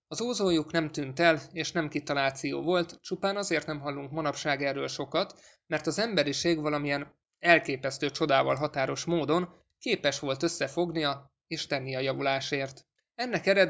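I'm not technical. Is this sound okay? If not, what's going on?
Yes, this speech recording sounds fine, with nothing wrong that you'd need to worry about.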